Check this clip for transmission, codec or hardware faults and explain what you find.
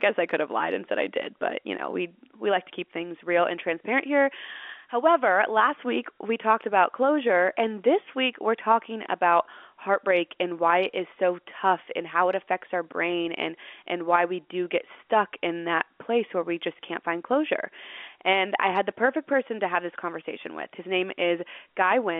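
No faults found here.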